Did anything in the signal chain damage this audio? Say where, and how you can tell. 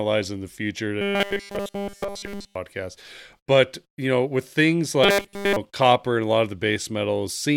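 Yes. From 1.01 to 2.55 s, and again from 5.04 to 5.57 s between "you know with things" and "copper and a lot", the speech becomes a rigid metallic buzz fixed at 200 Hz: robotic sound from repeated short buffers, likely a starved driver or buffer stage looping its last fragment. A 200 Hz buzz means a 5 ms repeat. Unlike codec warble, the pitch stays locked while essentially all of the real audio is skipped.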